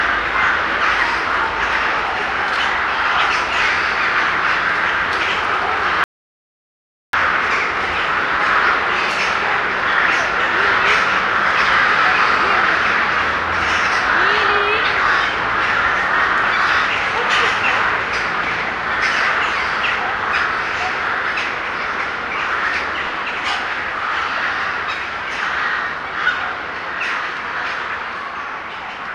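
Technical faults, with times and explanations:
6.04 to 7.13 s, rebuffering stall: the sound halts abruptly into silence for about 1.1 s, then picks up at exactly the point where it left off. The player had used up all its downloaded audio and waited for more data before continuing. The recording is paused, not damaged. That sets it apart from a dropout or packet loss, where the gap swallows part of the audio and it jumps ahead. Here nothing is skipped, and the clip simply runs about 1.1 s longer.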